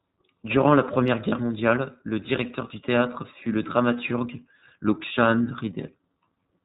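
From the start, the speech passes through the iLBC codec. Nothing above 4 kHz survives. The voice sounds plainly rough and synthetic, which fits the 13.33 kbps, 30 ms frame mode.

At 1.28 to 1.33 s, after "la première", lost iLBC frames cause a gap. One 30 ms frame is gone. The decoder repeats the last pitch cycle with noise, giving a brief buzzy held vowel. The voice returns almost at once, before "mondiale le directeur du".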